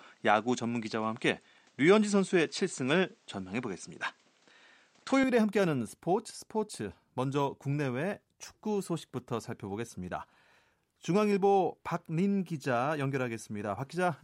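Input switched to a poorer device from 0.00 to 5.24 s, likely a lesser microphone: nothing above 9 kHz, faint added noise, and a seamless level step of about 5 dB.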